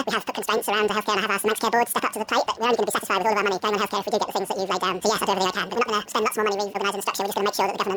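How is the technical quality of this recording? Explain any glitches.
The recording has a serious playback fault throughout. The audio is read two samples at a time, likely from a channel-count or sample-width mismatch. It runs at double speed and an octave high.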